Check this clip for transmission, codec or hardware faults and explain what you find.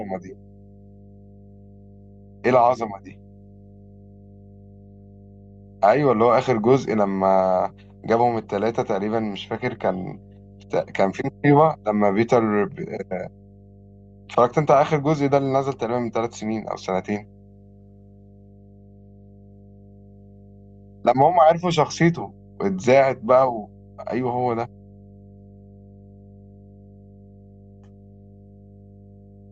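The clip has a hardware fault: mains hum runs under the speech from start to finish. A steady low tone sits at 50 Hz, roughly 25 dB below the speech level, so it stays audible in pauses and thickens the low end beneath the talker. The cause is power-line energy leaking into the signal path, typically through a ground loop between connected equipment or magnetic pickup from a nearby transformer. A constant 50 Hz tone points to a 50 Hz mains supply.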